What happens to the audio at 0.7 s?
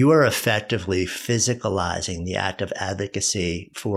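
At 0.7 s you're inside a drift correction step running from 0.31 to 1.20 s: the speech slows about 5.2% and drops roughly 93 cents, nearly a semitone, then snaps back, likely clock-matching software abruptly changing playback rate.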